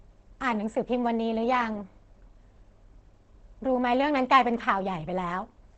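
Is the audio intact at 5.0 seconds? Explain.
No. At 5.0 s, as across the whole clip, the speech bears plainly audible damage that points to Opus compression, likely running in its low-rate speech mode (SILK) at around 16 kbps. That mode models the signal rather than preserving its full spectrum and restricts the band to wideband, so nothing is heard above about 8.5 kHz. The speech therefore sounds muffled and hoarse, lacking its airy top end.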